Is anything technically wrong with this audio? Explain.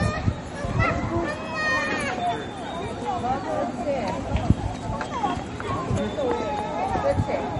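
Yes. MP3 compression damage runs through the whole clip and is plainly audible. The sound likely passed through a low-bitrate MP3 encoder; the damage fits a rate around 40 kbps. With that few bits, the encoder removes the treble entirely, leaving nothing above about 10.6 kHz. It also zeroes quieter frequency lines that switch on and off between frames. The result is dull and watery, with a swirling, metallic texture and softened transients.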